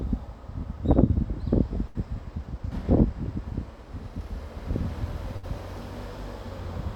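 A recording of sounds hit by two bursts of packet loss, where several packets in a row never arrived in time to play. The receiver covered each hole by stretching out the last sound and letting it fade: at 1.87 to 1.97 s about 73 ms of fill replaces 80 ms of audio, and at 5.37 to 5.45 s about 62 ms covers 60 ms. Each time a brief smeared, dimming tail is heard, then the audio jumps ahead with that stretch lost.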